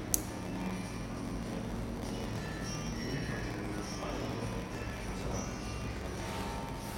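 Throughout, a block size mismatch (padded) zero-fills each block's end, which fits 512-sample reads. It buzzes at 86.1 Hz. Sound slows to 0.938 speed, timbre unchanged.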